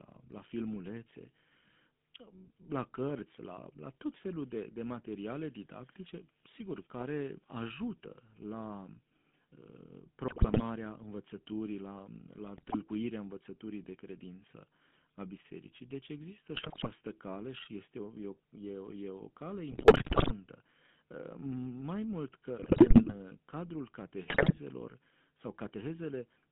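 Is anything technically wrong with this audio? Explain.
Yes. The whole recording has passed through the GSM full-rate codec. The speech is confined to roughly 150 Hz to 3.5 kHz. It carries a buzzy, gravelly roughness, which fits a 13 kbps full-rate stream. The codec rebuilds the voice from a vocal-tract filter driven by coarse, regularly spaced pulses, so fine detail is lost.

GSM bit errors occur at 10.28–10.63, 12.58–12.76, 16.54–16.87, 19.72–20.33, 22.58–23.15 and 24.28–24.59 s. Corrupted filter, pitch and gain values reach the decoder. Frames come out with a warped spectrum or a sudden level jump, so the voice breaks into squawks, pops and gargling.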